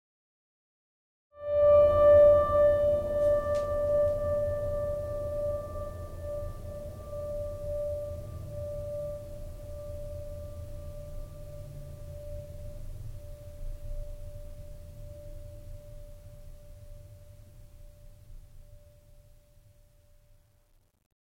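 Music, no technical faults heard; the level fades in smoothly from around 1.5 s to full by 2.08 s, with no click or hard edge.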